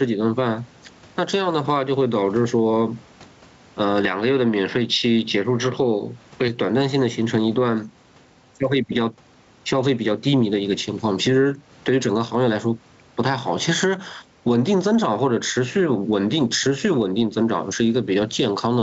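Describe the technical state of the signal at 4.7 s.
At 4.7 s the speech sits inside a stretch from 4.04 to 6.48 s where the input switched to a poorer device, most likely a fallback microphone or a headset taking over mid-recording. The band stops at 6 kHz, so the sound turns duller and boxier, the level shifts by about 5 dB, and a new noise floor about 50 dB down appears. There is no gap at either switch. On a spectrogram, the energy above 6 kHz is cut off sharply across that span.

Gain pumping also runs through this moment and the whole clip. The input gain is too high, and a fast limiter, the likely cause, pulls it down by about 15 dB on each loud syllable and then lets it rise again. Loud and soft parts sit close together and the sound is squashed. The waveform envelope looks evened out.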